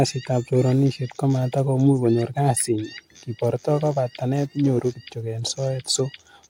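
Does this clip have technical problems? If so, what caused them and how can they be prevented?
No, nothing technical stands out in this speech recording, so there's nothing here that needs fixing or preventing.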